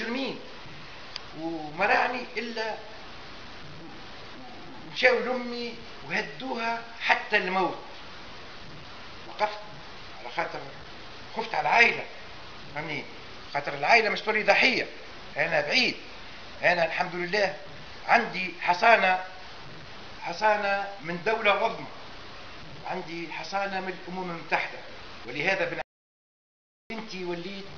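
At 25.82 s the input feeding the recorder was likely lost for a moment, through a dropped connection or an unintended mute, while writing carried on with silence. The result is an audio dropout to silence: the sound cuts off abruptly and leaves a completely dead gap with no background or room tone until 26.90 s, when it returns mid-flow. About 1.09 s of material is simply missing.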